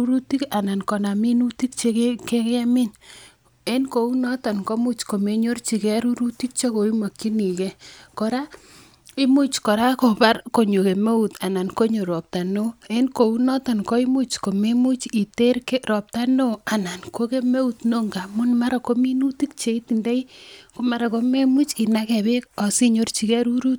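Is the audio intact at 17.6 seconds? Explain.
Yes, at 17.6 seconds the speech plays through intact, with no dropout, click, distortion or other audible fault at that moment.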